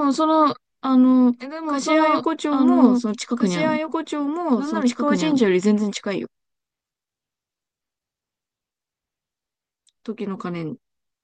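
From the very start until 5.46 s, the speech is heard twice: a second copy trails the first by about one and a half seconds, only a few decibels quieter, dry and full-band with no reverberant tail, and it drops out abruptly at 5.46 s. This is a doubled audio track, likely from the same signal being captured again through a slower path or an edit leaving two out-of-step copies layered together.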